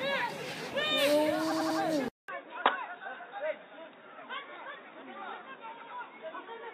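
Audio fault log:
1.50–1.78 s and 5.81–5.90 s, repeated frames: a 93 ms chunk plays again, three extra times in the first spot (about 0.28 s added) and once in the second, so you hear a stutter.
2.08 s to the end, input switched to a poorer device: after a 200 ms gap the sound turns dull and boxy, with nothing above 3.8 kHz, roughly 10 dB quieter, and a faint new noise floor. This is likely a change to a narrower-band microphone or headset profile.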